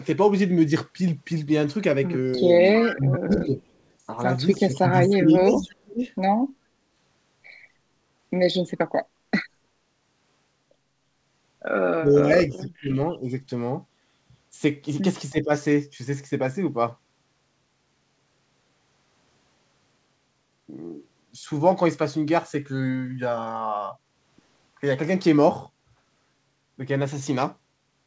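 A speech recording carried over a call link whose spectrum stops at 8 kHz, consistent with G.722, has three kinds of fault. From 2.81 to 2.95 s there is a brief echo leak: a faint copy of the speech returns about 318 ms late, roughly 10 dB below the direct sound, likely from a loudspeaker echo canceller that let some pickup through. On a spectrogram it shows as a weak, time-shifted repeat of the harmonic pattern. Speech suppressed in double talk follows at 2.94 to 3.61 s, 4.57 to 6.04 s, 11.98 to 13.28 s and 15.31 to 15.51 s. The level sinks by up to about 25 dB at worst and around 10 dB in the last case, likely because the canceller turned the talker down while both sides spoke. On the waveform these appear as pinched envelope sections, with the upper bands thinning or going dark on the spectrogram. At 9.07 to 9.23 s the background is gated by the echo canceller, pulling the room noise down by about 6 dB for a moment. 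This shows as a short notch in the noise floor across all frequencies, which then recovers.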